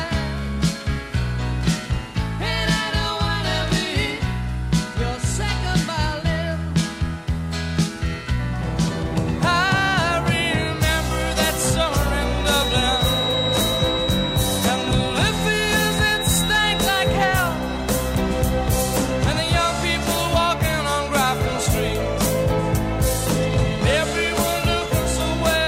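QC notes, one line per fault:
12.33–17.22 s, feedback whistle: thin steady 3.8 kHz tone a little below the programme level, swelling and fading slowly, likely a speaker-to-microphone loop held just short of runaway.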